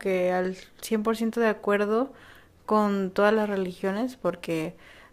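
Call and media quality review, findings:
Crude rate conversion, 3.36 s to end of clip (5.13 s). Gritty, inharmonic fizz riding on the louder and brighter speech, roughly 30 dB below it. Probable component: resampler dropping or repeating nearest samples with no filter, pattern fitting a 48 kHz to 44.1 kHz step. Unlike codec swirl, these tones are shifted, inharmonic copies of the speech and repeat in a pattern set by the two rates.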